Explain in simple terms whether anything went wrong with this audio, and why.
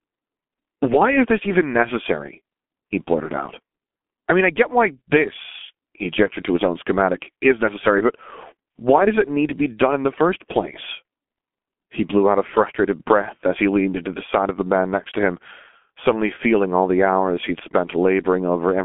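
Throughout the recording, the speech has passed through the G.723.1 codec, an early internet-phone format that squeezes sound hard. Nothing above about 3.7 kHz survives, so voices sound muffled and hoarse, and crisp consonants blur together.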